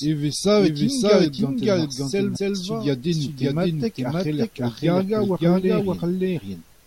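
A doubled audio track runs through the whole of this speech clip: a second full-band copy trails the first by about half a second at roughly the same loudness, with no decay or room colour, most likely from the audio being captured again by a slower path. Damaged data in the compressed stream appears from 2.35 to 2.37 s, where the decoder misreads the corrupted frames, loses sync and skips ahead to the next valid frame header.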